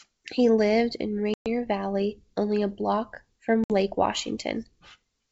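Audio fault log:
1.34 to 1.47 s and 3.64 to 3.72 s, packet loss on an ADPCM call: the sound drops into abrupt silent holes of about 120 ms and then 60 ms, where roughly seven and then a few packets went missing. Because ADPCM codes each sample as a change from a prediction, the receiver's predictor and step size drift away from the sender's during each gap, so the sound resumes slightly distorted until the two resynchronise.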